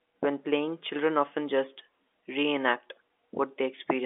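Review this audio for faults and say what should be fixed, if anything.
Nothing needs fixing: the speech is band-limited to the telephone range with no content above 3.7 kHz, as expected from G.711 telephone coding at what sounds like the standard 64 kbps mu-law rate.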